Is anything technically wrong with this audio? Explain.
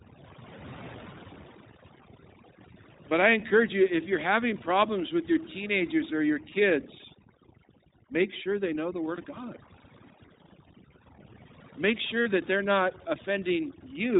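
Yes. The speech has three kinds of technical fault.

Throughout, the background drops to near silence dotted with twinkling specks. This is overdone noise removal: a noise reduction stage set too aggressively pulls individual frequency bands down whenever they resemble its noise estimate, taking quieter parts of the voice with them.

Also throughout, the speech is band-limited, with nothing above 4 kHz, and has a rough, slightly synthetic edge that is plainly audible. That points to the iLBC codec, which codes each frame's excitation independently. The sound fits 20 ms frames at around 15 kbps.

At 9.16 to 9.19 s and again at 12.22 to 12.27 s, the voice briefly smears into a held, faintly buzzy vowel, then snaps back to normal at once. These are lost iLBC frames. The decoder fills each gap by repeating the last pitch cycle mixed with noise. The first gap fits a single lost 20 ms frame, and the second fits about 40 ms lost.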